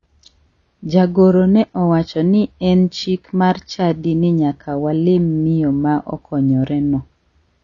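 Throughout, likely AAC compression at a bitrate consistent with 24 kbps cuts everything above 7 kHz, leaving the speech dull and plainly smeared.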